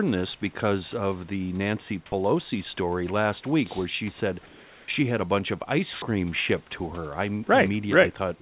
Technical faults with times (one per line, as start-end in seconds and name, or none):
2.06-2.12 sound dropped by the voice detector
4.46-4.88 comfort noise in place of the background
5.93-6.02 comfort noise in place of the background